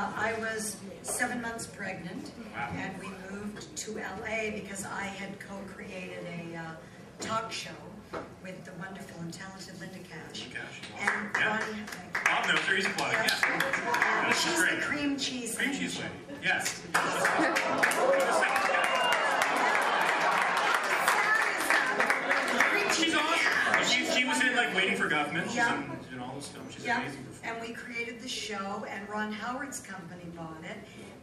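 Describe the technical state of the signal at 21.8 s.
At 21.8 s the signal is intact, with no dropout, distortion, glitch or other technical fault audible at that moment.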